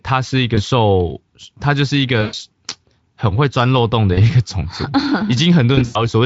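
You get four dropouts handled by the codec's packet loss concealment: short blips at 0.55–0.60 s and 4.13–4.21 s (about 20 and 40 ms lost), then longer ones at 2.21–2.35 s (about 120 ms) and 5.75–6.09 s, where roughly 140 ms went missing in bursts over 200 ms, the longest about 100 ms. Each time, the decoder keeps repeating its last pitch and filter while fading the gain, so you hear a buzzy, smeared tone dying away, and it stays weak for a moment after real packets resume. The Speex coding leaves light codec damage throughout.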